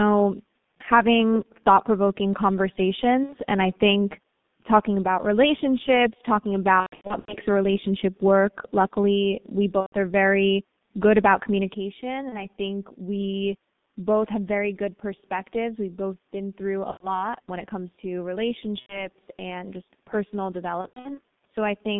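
G.723.1 codec damage affects the whole of this speech recording and is heavy. Everything sits between roughly 150 Hz and 3.6 kHz, so the speech sounds muffled and hoarse, and consonants smear because the coder refreshes its model of the voice only every 30 ms. The coarse texture fits its 6.3 kbit/s mode. VoIP packet loss concealed by the speech codec interrupts the speech seven times: 3.23–3.37 s, 6.80–7.37 s, 9.80–9.95 s, 12.29–12.47 s, 16.91–17.12 s, 18.80–19.08 s and 20.81–21.20 s. In each gap the decoder keeps replaying its last pitch and spectral shape at falling gain, so the speech turns into a buzzy, fading smear, muted wherever a run reaches a third lost frame in a row. Because each frame is built from the one before, the speech stays thin for a moment after audio resumes. The gaps range from about 30 ms to 330 ms of missing audio. The long 6.80–7.37 s event and the 20.81–21.20 s event are scattered drops, with the longest unbroken runs of 120 ms and 90 ms. 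At 11.74 s the level falls abruptly by about 6 dB and stays down to the end, likely because one channel drops out before the stereo pair is summed to mono, which halves the shared signal.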